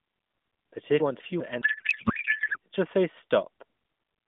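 At 1.0 s there's a brief jumbled patch lasting until 1.4 s. It's chunks out of order: two 200 ms blocks got swapped, so the one that should have come first turns up a chunk late, after its neighbour. Nothing is actually missing, but the sequence is scrambled, and there are hard joins where the pieces butt up against each other.

Right after that, from about 1.62 s to 2.57 s, the speech turns into garbled, warbly noise that barely tracks what was being said. That's a codec payload misread on the AMR stream. The frames were packed octet-aligned but decoded as bandwidth-efficient, so every field lands in the wrong place and the decoder synthesises nonsense from otherwise valid-looking frames. It clears up once the two ends agree again, just before "just say", and the narrowband phone-line sound comes back.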